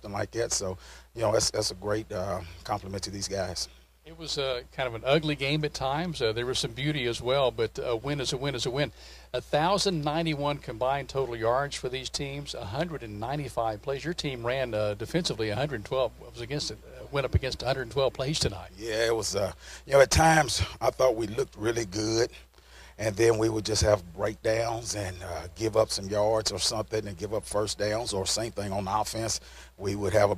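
No technical faults can be heard anywhere in the recording.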